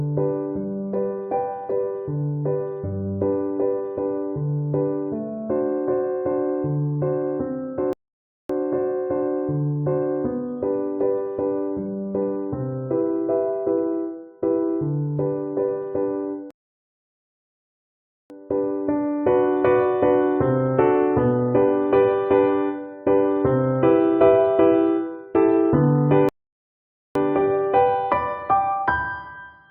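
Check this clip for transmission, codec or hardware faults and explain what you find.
Three rebuffering stalls interrupt the audio, at 7.93 to 8.50 s (0.56 s), 16.51 to 18.30 s (1.79 s) and 26.29 to 27.15 s (0.87 s). Each time the player's buffer ran dry, so the sound halts into silence and then picks up exactly where it stopped. Unlike a dropout, nothing is skipped; the gaps only add time.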